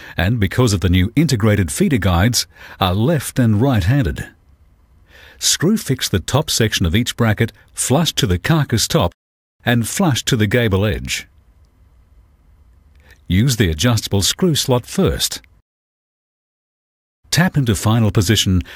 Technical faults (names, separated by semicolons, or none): crude rate conversion